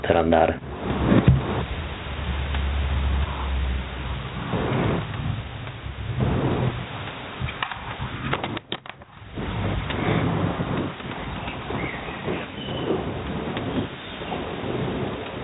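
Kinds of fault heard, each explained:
Gain pumping, throughout: a swing of around 20 dB, likely from input gain set far too high with a fast limiter pulling it down, leaving loud and soft speech squashed together.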